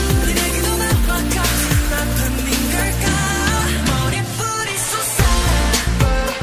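Nothing is technically wrong with the clip.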